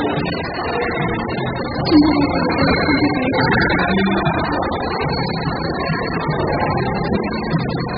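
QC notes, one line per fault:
Throughout, AAC compression. Nothing remains above 5 kHz, so the audio sounds dull and muffled. Sustained parts warble and fizz, and fine detail is smeared. The likely cause is heavy AAC-LC coding starved of bits, which fits a rate near 8 kbps.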